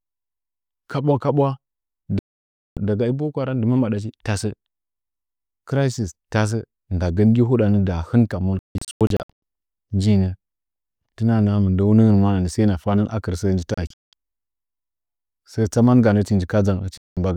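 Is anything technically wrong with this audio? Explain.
Yes. The speech drops to silence four times: from 2.19 to 2.77 s, just before "daga i boko haram"; from 8.59 to 9.30 s, right after "gi huɗan dahɨn kam", as a cluster of short holes up to 160 ms long; from 13.74 to 14.13 s, again broken up, with gaps up to 190 ms; and from 16.98 to 17.17 s. This is digital broadcast dropout. The receiver muted whenever incoming frames were lost or corrupted and resumed once clean data returned, so whatever was transmitted during each gap is gone.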